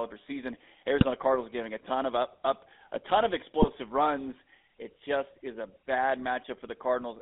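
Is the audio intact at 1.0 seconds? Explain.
No. From 0.98 to 1.05 s there are GSM bit errors: corrupted filter, pitch and gain values reach the decoder across what sounds like about three frames, producing a squawking, gargled burst. On a spectrogram it shows as a smeared, misshapen spectral patch.

Underneath, the GSM full-rate codec runs throughout, with a buzzy, gravelly roughness that fits 13 kbps full-rate coding. A spectrogram shows energy confined to roughly 250 Hz to 3.6 kHz, with coarse, regularly pulsed harmonic texture and nothing above the cutoff.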